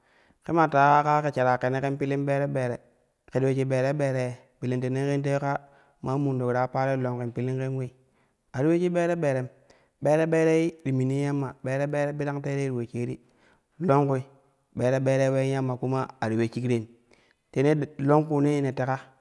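From 10.5 to 12.2 s the speech carries a fault consistent with a resampler restarted on every block. The 48 kHz to 24 kHz conversion was run on each 100 ms block in isolation, so the filter had no real neighbouring samples at the block boundaries and left a small error at each edge. The result is a steady ticking at 10 Hz riding on the speech, audible only while signal is present.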